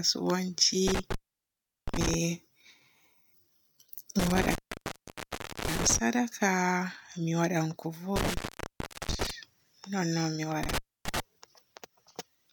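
Four dropouts from an intermittent contact run through this speech, at 0.87 to 2.14 s, 4.19 to 5.98 s, 8.16 to 9.31 s and 10.63 to 11.20 s. A loose cable or plug keeps losing its connection, so the signal crackles, vanishes to faint hiss, then crackles back. The gaps last roughly 0.73 s, 1.11 s, 0.72 s and a shorter 0.28 s near the end.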